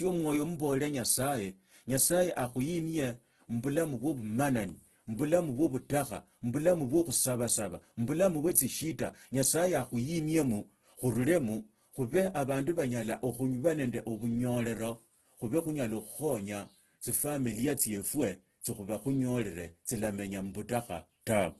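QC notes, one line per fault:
Throughout, Opus compression: the speech is grainy and rough, with noise standing in for detail. The spectrogram shows a flat ceiling at 12.1 kHz and noise-filled bands with few holes. The likely cause is heavy Opus music-mode coding at a rate that fits about 12 kbps.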